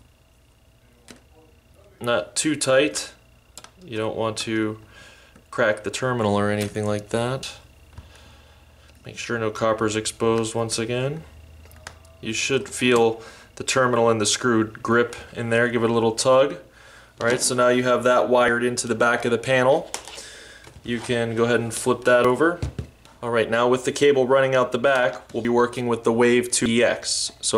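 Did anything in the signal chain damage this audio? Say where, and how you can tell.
Yes. At 5.53, 7.43, 18.48, 22.25, 25.45 and 26.66 s the audio skips ahead with no gap, losing about a twentieth of a second each time, roughly three times that at 26.66 s. This is likely a dropped buffer (overrun) at the driver stage, with unread input overwritten.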